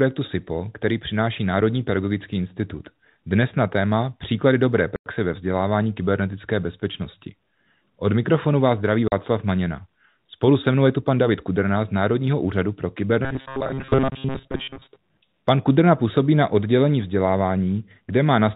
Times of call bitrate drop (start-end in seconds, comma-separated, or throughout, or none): none